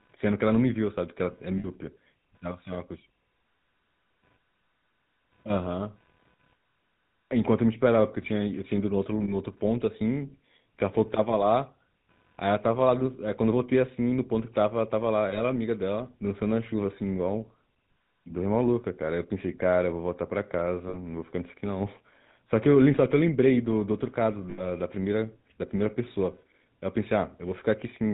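From the start, the speech carries the GSM full-rate codec's signature roughness. Everything above 4 kHz is missing, and voiced sounds take on a buzzy, gravelly grain. That grain comes from rebuilding the voice with a vocal-tract model driven by coarse, regularly spaced pulses. The damage is plainly audible and fits the 13 kbps GSM full-rate coder. A plain telephone band-limit would dull the top end without adding this grit.

Running beneath it, independent of the speech, is computer activity noise. It is a faint buzz with a pulse rate of around 500 Hz, sitting roughly 45 dB below the speech. Load changes in the computer shift the audio circuit's shared ground, so the buzz follows the machine's activity rather than the sound. That is what separates it from mains hum, which stays steady at the supply frequency and its harmonics.

Lost GSM frames occur at 1.58 s, 9.24 s, 15.3 s, 20.88 s and 24.5 s. 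The missing stretches last 60, 40, 20, 60 and 80 ms. Each time, the decoder repeats the last good frame, so the speech briefly freezes into a rough, metallic ring. The longest, at 24.5 s, is still far too short to fade fully to silence. Unlike a plain dropout, the gap is filled with smeared, ringing sound rather than a click or hole.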